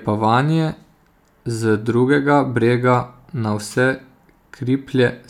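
Nothing in this speech recording stood out as a problem on listening.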